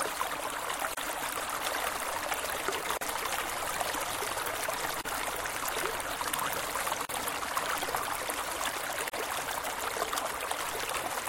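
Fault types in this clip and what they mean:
Gap at a join of encoded pieces: separately encoded chunks joined with their padding left in, so the sound drops out for 34 to 40 ms about every 2 s.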